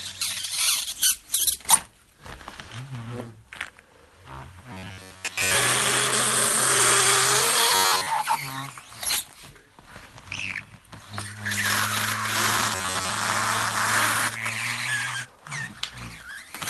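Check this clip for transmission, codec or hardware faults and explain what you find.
One fault shows up three times: robotic sound from repeated short buffers, heard over audio that came through an Opus call path at 32 kbps with its bandwidth limited to 12 kHz.

From 4.72 to 5.55 s, 7.75 to 8.07 s and 12.75 to 13.10 s, the sound turns into a rigid, metallic buzz near 93.8 Hz. The likely cause is audio arriving too seldom, so roughly 10.7 ms chunks are replayed, covering about two thirds of each stretch.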